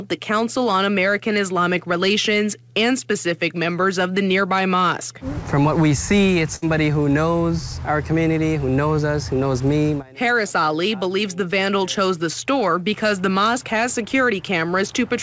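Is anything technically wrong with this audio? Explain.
Yes. From 6.56 to 6.64 s the last sound is stretched into a brief held, fading sound, then the audio jumps ahead with about 60 ms skipped. This is a burst of packet loss: consecutive packets were lost or arrived too late, so the receiver extended and faded what it had. The call path's codec, which fits G.722 at 64 kbps, leaves nothing above 8 kHz.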